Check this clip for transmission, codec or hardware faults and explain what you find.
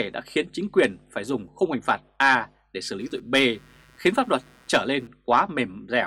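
There's one hardware fault here: computer activity noise from 3.0 s to 5.07 s. It's a buzzy, chirping layer pulsing at around 150 Hz, sitting roughly 35 dB under the signal. It starts and stops on its own schedule, ignoring what the sound is doing. That pattern points to the computer's load shifting, from processor, graphics or mouse work, and dragging the shared ground of the audio circuit, so the activity leaks in electrically.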